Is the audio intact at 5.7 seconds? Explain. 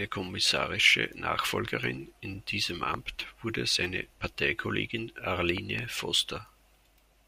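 No. At 5.7 seconds the speech is disrupted by a loud pop, actually two pops in quick succession, spanning roughly 5.58 to 5.81 s and peaking around 10 dB above the speech level. The likely cause is a sudden voltage step or pulse from a plug, switch, static discharge or driver glitch, which the downstream circuitry shaped into short impulses. They sound as sharp thumps laid over the speech, which continues underneath.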